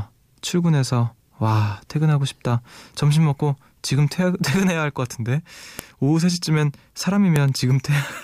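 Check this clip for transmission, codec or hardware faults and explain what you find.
There's one fault here, a file header played as audio, at 5.79 s and again at 7.36 s. Each is a sharp, loud snap, where a WAV header was left in at a join and its bytes got played as samples.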